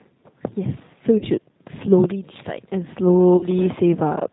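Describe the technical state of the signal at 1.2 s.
Right at 1.2 s you're inside a burst of VoIP packet loss concealed by the speech codec, running from about 1.18 to 1.26 s. Around 40 ms of audio went missing, which fits two lost packets. The decoder filled the hole by stretching its last pitch and filter state while fading the gain, so you hear a stretched, buzzy tone or coloured noise that dies away rather than real sound. The recovery drags on for tens of milliseconds or more past 1.26 s, because each frame builds on the one before.

Underneath that, the whole clip has plainly audible G.729 codec damage, consistent with G.729A at 8 kbit/s. The speech is being rebuilt from a vocal tract model and a few pulses per frame, so it comes across rough and slightly synthetic, with nothing above 4 kHz.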